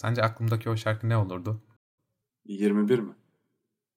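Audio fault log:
1.77–1.92 s, stream reconnect: after "o şarkı ne olurdu", a 157 ms flat silent gap; a restarted decoder resumes about 0.2 s further on, skipping audio.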